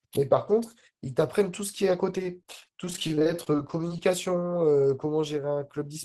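Speech clip with repeated packet loss from 2.18 to 3.98 s: frequent short dropouts, up to 27 ms, are patched by extending prior sound, giving choppy speech with pieces missing.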